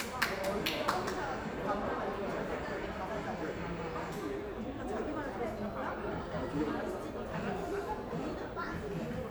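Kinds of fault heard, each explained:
Nothing stood out on listening to this audio.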